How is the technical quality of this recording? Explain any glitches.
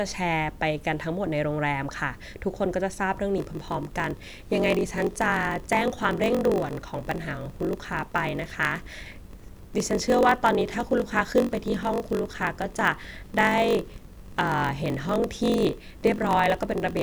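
The recording is impaired from 3.36 s to the end. From there the speech carries a steady 46.9 Hz buzz and drags, running at 0.938 of normal speed with pitch roughly unchanged. This is a block size mismatch (padded): each block read, which fits a 1024-sample size, receives fewer samples than it holds, and the remainder is zero-filled. The silent gaps recurring every block produce the buzz and slow the timing.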